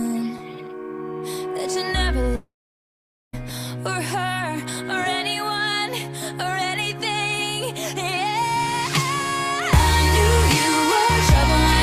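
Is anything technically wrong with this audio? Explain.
Yes. From 2.35 to 3.35 s there is a long network dropout, likely from packets ceasing to arrive. The last sound is stretched into a fading buzz, then about 840 ms of near-silence follows, and the audio resumes with roughly a second missing.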